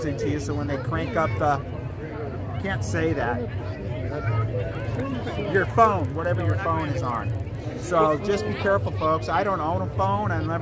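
From 4.6 to 7.75 s the sound picks up a regular ticking at 20 Hz, close to a low buzz. This is a resampler restarted on every block. The signal was converted in separate 50 ms pieces, as part of a change from 48 kHz down to 16 kHz, so each piece's edges were computed without the real neighbouring samples. On a spectrogram, thin vertical broadband lines appear every 50 ms. On the waveform, small steps or glitches mark each block boundary.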